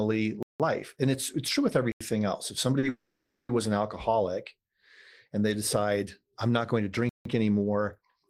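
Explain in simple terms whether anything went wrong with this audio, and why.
Three kinds of fault interrupt this speech. Blocks of digital silence cut the sound out to silence, at 0.43 to 0.60 s, 1.92 to 2.01 s (just after "it's it's true with") and 7.09 to 7.25 s.

A short stall from a late packet holds one sound about 40 ms too long at 2.79 to 2.85 s. Unlike the silent blocks, nothing drops out; the sound is just stretched.

A call audio freeze follows at 2.89 to 3.51 s, just before "an alcoholic". For 0.6 s the last sound lingers as a fading buzz that never reaches silence, likely because packets were held up on the network. The speech then resumes where it stopped, so nothing is lost, but this pause is much longer than the stall.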